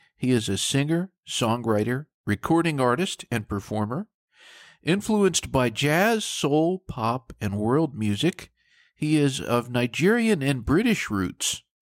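No technical faults are audible.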